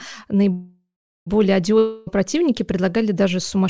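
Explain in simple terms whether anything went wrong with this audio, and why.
From 0.52 to 1.28 s the speech stalls: the last sound hangs on as a fading buzz, then goes silent for over a third of a second before resuming exactly where it stopped. This is a call audio freeze, likely caused by delayed packets emptying the receiver's buffer, so nothing is lost.

From 1.78 to 2.09 s the sound again turns into a brief fading buzz. When the speech returns at "противники предлагали даже", about 0.28 s of it is gone. This long network dropout was likely caused by packets that never arrived.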